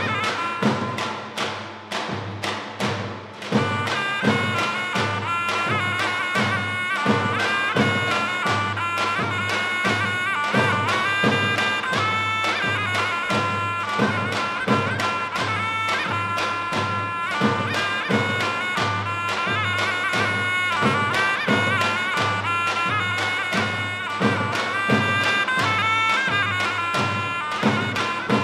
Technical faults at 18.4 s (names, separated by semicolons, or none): none